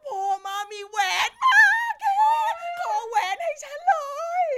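Nothing technically wrong turns up in this short speech recording, so there's no fault here to point to or explain.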